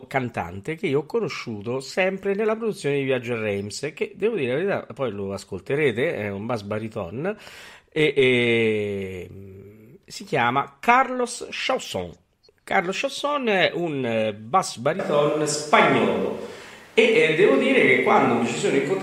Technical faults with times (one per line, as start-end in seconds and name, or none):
14.99-19.02 switch to a distant microphone